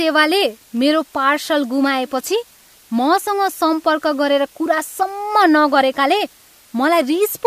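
Low bit depth with dither runs throughout the speech: rounding to very few levels, consistent with 8 bits, leaves a steady, even hiss roughly 30 dB below the voice, without distortion.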